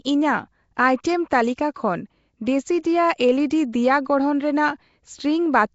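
Throughout the speech, a rough, hissy halo and smeared, underwater quality point to Nellymoser compression, likely Flash's microphone codec, at a rate fitting 32 kbps. Starved bands are refilled with noise, so a spectrogram shows speckled patches and nothing above 7.7 kHz.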